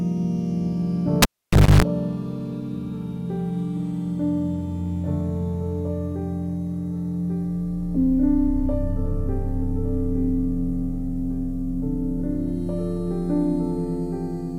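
From 1.22 s to 1.82 s a live cable gets pulled and plugged in: a pop, about 550 ms of near silence, roughly 270 ms of 50 Hz mains buzz, then another pop.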